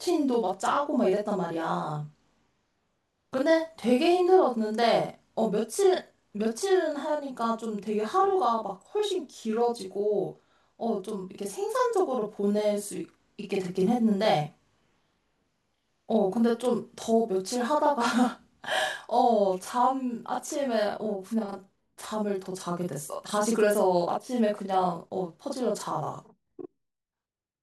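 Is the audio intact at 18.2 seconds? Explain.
No. A channel delay (doubling) runs through the whole clip: one channel arrives 40 ms late, and summing both to mono stacks that late copy on the original. At 18.2 s the speech sounds doubled, each syllable trailed by an equal-level slap.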